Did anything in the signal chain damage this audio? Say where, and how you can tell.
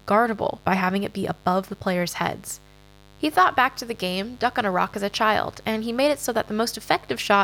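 Yes. The analogue wiring let in a mains buzz that runs under the speech for the whole clip, well below the speech level. Spikes coupled twice per 50 Hz cycle give a raspy tone, seen on a spectrogram as evenly spaced horizontal lines at 50 Hz harmonics reaching several kHz.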